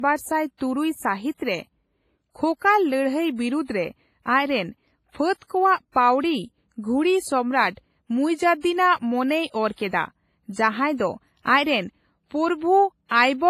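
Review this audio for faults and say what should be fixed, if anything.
Across the whole speech recording the top end stops dead at about 15.4 kHz, and the low-bitrate coding artefacts of an earlier encode remain audible beneath an otherwise clean-looking high-bitrate MP3. This is likely low-bitrate audio saved at a high bitrate: a small, heavily compressed file, one that points to something like a 24 kbit/s WMA stage, was re-encoded at a generous bitrate, which enlarged the file but could not restore the detail or bandwidth the first encoder discarded. To prevent it, encode once from the original uncompressed source rather than from a compressed copy.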